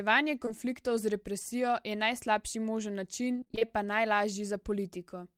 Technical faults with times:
0.45-0.52 short concealed packet loss
3.32-3.69 repeated packet loss (robotic sound)

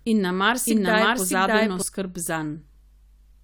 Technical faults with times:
0.00-1.82 doubled audio track

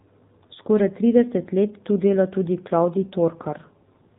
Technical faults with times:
0.00-4.18 AMR narrowband mobile codec

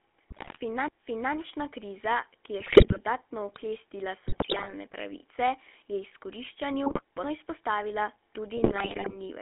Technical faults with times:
0.00-9.41 GSM full-rate codec
0.30-0.58 GSM bit errors
2.60-2.99 GSM bit errors
4.27-4.72 GSM bit errors
6.86-7.01 GSM bit errors
8.56-9.16 GSM bit errors

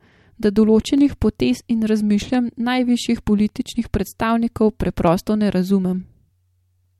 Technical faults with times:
0.98-6.44 clock drift buffer slips

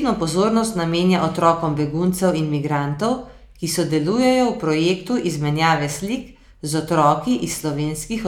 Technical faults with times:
none

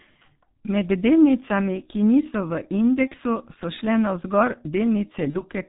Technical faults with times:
0.00-5.68 G.723.1 codec
3.08-3.15 VoIP packet loss concealed by the speech codec
5.30-5.41 VoIP packet loss concealed by the speech codec

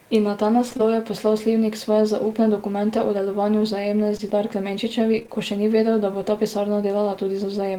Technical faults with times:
0.69-0.81 short concealed packet loss
4.17-4.21 short concealed packet loss
5.19-5.30 short concealed packet loss

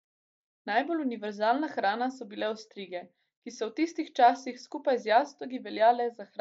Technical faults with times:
none

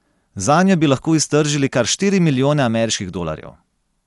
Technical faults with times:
0.00-4.07 Dolby Digital compression

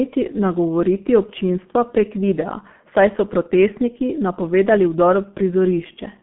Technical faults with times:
0.00-6.22 G.723.1 codec

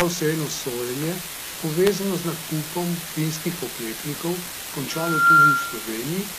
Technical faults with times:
0.00-6.38 low bit depth with dither
0.00-6.38 HE-AAC compression
4.90-5.91 loudspeaker feedback squeal

